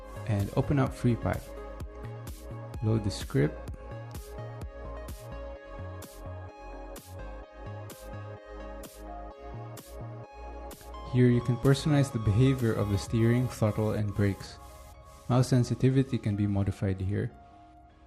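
No technical faults can be heard anywhere in the signal; it stays continuous and steady throughout.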